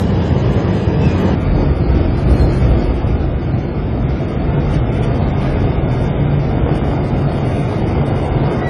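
The whole clip shows transcoding between lossy codecs. Several kinds of smearing and swirl are layered together. This likely comes from a chain of low-bitrate codecs, ending in AAC-LC, each adding artefacts to the last.

From 0.0 to 1.35 s, a section plays at the wrong speed. It runs 1.36 times too fast, so the sound is hurried and raised by about five semitones. A likely cause is playback or editing on a mismatched clock.

From 6.58 to 8.64 s comes a train of clicks. About twenty similar pops arrive at roughly 10.8 per second, with uneven spacing. They stand about 5 dB above the sound. Nearby interference or a faulty connection is the likely source.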